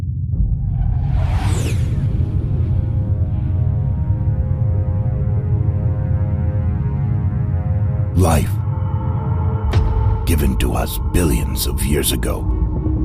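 No technical faults can be heard anywhere in the audio.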